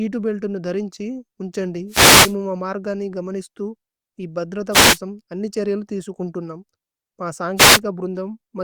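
Three short bursts of static break over the speech, each a brief swish that swells and then clears: from 1.88 to 2.35 s, from 4.71 to 4.99 s, and from 7.56 to 7.80 s. These are wireless microphone noise hits. The radio link from an analogue FM microphone dropped as reflected signals cancelled at the receiver, and the receiver's own hiss rose for roughly a quarter to half a second each time.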